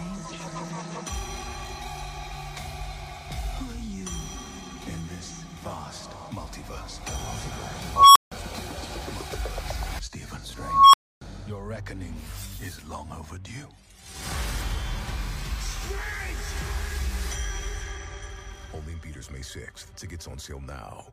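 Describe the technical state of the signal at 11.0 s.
At 11.0 s the audio has dropped to silence, after a tone of around 1 kHz swelled over about 0.37 s into a loud squeal. This is an unstable filter between 10.57 and 11.21 s: a recursive filter with bad coefficients fed back on itself until its values overflowed, muting the output for about 0.28 s until it reset.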